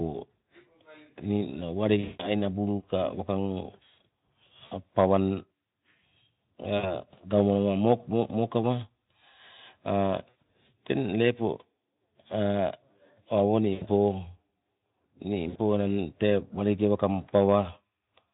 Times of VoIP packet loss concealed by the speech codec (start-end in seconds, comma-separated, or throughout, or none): 1.99-2.28, 4.65-4.73, 6.77-6.95, 10.29-10.35, 13.73-13.86, 15.50-15.60